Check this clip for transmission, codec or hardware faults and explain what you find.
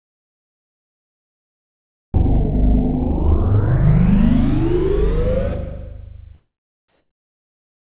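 One fault turns up near the end: comfort noise in place of the background, from 6.88 s to 7.91 s, the last second of the clip. The likely cause is discontinuous transmission. The sender's voice detector judged the quiet background, about 50 dB below the loud parts, to be silence and stopped sending audio. The receiver then filled the gap with synthetic noise. The detailed ambience gives way to a smooth, featureless hiss about 4 dB quieter, all within the 4 kHz band of the G.711 call path.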